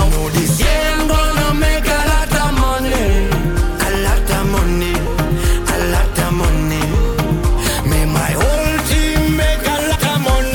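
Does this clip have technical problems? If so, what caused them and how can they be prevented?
Yes, there are compressed frames skipped at 2.05 s and 9.94 s: the audio jumps ahead, about 50 ms and then about 150 ms, which fits a couple of 26.1 ms frames and then roughly five going missing. Check the file's integrity after encoding and transfer.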